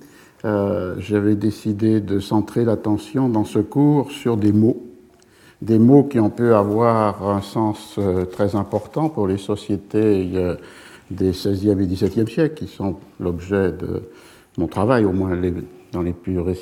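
No technical faults can be heard anywhere in the recording. Nothing at any point in it calls for a timestamp or a repair.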